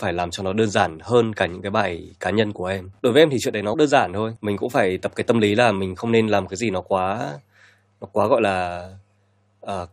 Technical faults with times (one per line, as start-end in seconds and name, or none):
3.73 compressed frames skipped